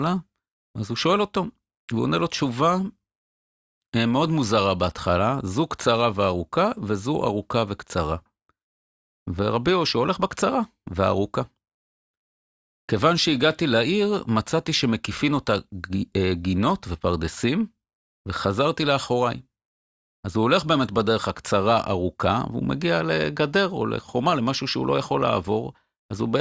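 Nothing technically wrong turns up in this speech recording; it has simply been through ordinary call microphone processing, which trims the deepest bass and leaves nothing above 8 kHz, and that's just how a call sounds.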